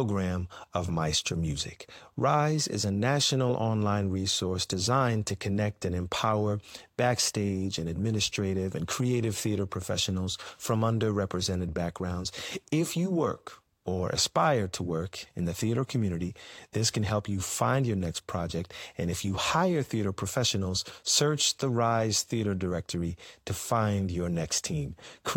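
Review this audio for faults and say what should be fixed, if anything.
No faults heard; nothing needs fixing.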